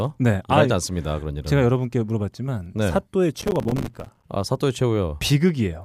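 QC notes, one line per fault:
3.42–4.24 s, processor overload crackle: for about 0.8 s the speech is torn by a dense run of tiny silent dropouts, around fifty of them, each fitting a missed buffer of roughly 5 ms. The processor could not deliver audio on time, so each late buffer left a hard-edged gap whose abrupt cut-in and cut-out clicks. On the waveform the signal repeatedly snaps to near-flat silence. On the spectrogram, closely packed vertical broadband stripes cross the harmonics and stop when the load clears.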